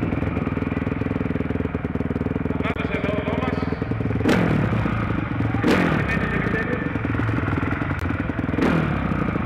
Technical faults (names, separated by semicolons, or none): Bluetooth dropout